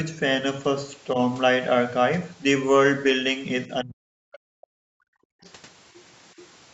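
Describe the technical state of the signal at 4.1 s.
Speech suppressed in double talk runs from 3.67 to 4.46 s, likely because an echo canceller mistook the talker for loudspeaker echo while both sides spoke and turned everything down. Around 4.1 s the speech dips, sinking at its deepest by roughly 40 dB.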